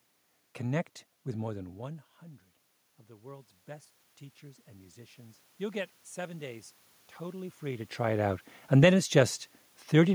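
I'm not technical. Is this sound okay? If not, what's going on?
No. Automatic gain rising happens from 4.64 to 6.73 s, just before "totally free to". The recording system noticed the voice had become much quieter and slowly turned its volume up, so the voice and the room's background noise swell together, recovering only part of the lost loudness.

Automatic gain falling follows from 8.01 to 8.99 s, right after "totally free to". This time the system judged the input too loud, or the background too strong for its setting, and eased its volume back down, so voice and background sink together.

The talker also seems to shift position around 1.5 s and again near 7.5 s, which changes how loud the voice is at the microphone. That is natural movement, not a system fault.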